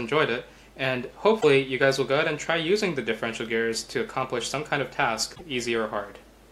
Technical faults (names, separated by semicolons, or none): damaged data in a compressed stream